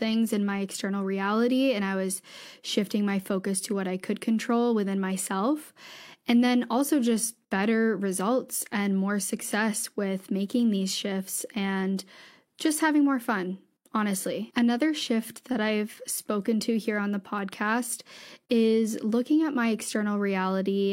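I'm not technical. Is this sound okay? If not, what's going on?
Yes, no faults here.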